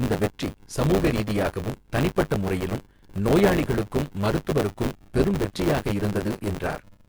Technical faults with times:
0.00-7.09 buffer tearing

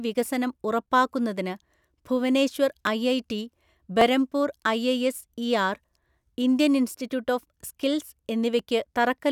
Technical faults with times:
0.58-8.59 clock drift buffer slips

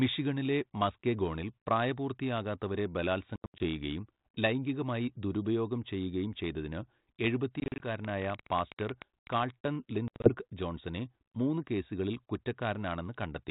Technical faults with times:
3.36-3.64 packet loss on an ADPCM call
7.60-7.86 packet loss on an ADPCM call
8.05-9.34 train of clicks
10.08-10.33 packet loss on an ADPCM call

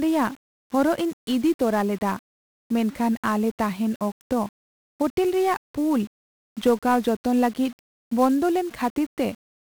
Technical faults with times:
0.00-9.71 1-bit DFPWM compression

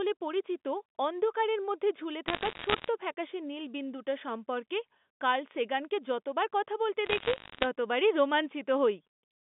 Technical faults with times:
2.28-2.88 bit errors on a digital phone line
7.06-7.66 bit errors on a digital phone line

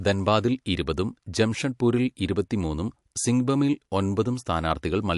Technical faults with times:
0.00-5.17 MP3 compression

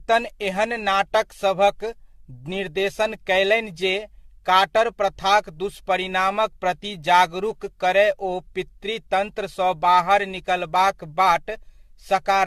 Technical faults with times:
0.00-12.46 generation loss

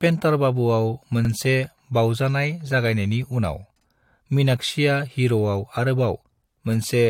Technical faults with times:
1.25-1.30 overlapping chunks
3.80-3.85 overlapping chunks
6.35-6.40 overlapping chunks

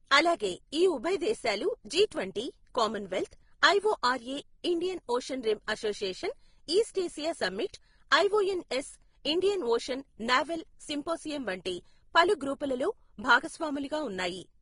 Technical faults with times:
0.00-14.61 transcoding between lossy codecs

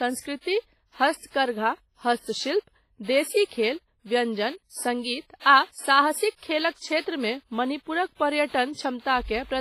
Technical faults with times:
0.00-9.61 WMA compression

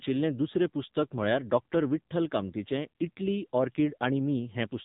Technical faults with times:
0.00-4.85 AMR narrowband mobile codec

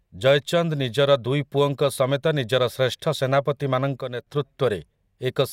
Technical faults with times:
4.01-4.27 sudden gain jump

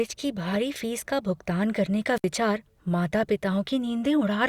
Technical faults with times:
2.15-2.25 wireless microphone squelch dropout

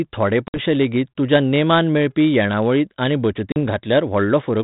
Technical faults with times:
0.48-0.59 packet loss on an ADPCM call
3.52-3.57 packet loss on an ADPCM call

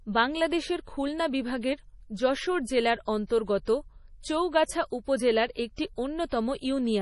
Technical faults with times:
0.00-7.01 MP3 compression

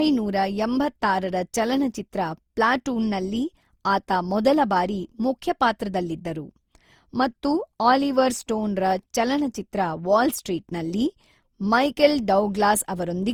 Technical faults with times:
0.00-13.33 generation loss

